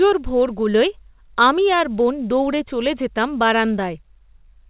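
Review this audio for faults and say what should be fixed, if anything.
Nothing here needs fixing: the speech came over a call line using G.711 mu-law at 64 kbps, so it stops at 4 kHz like an ordinary phone call, and that's simply how the line works.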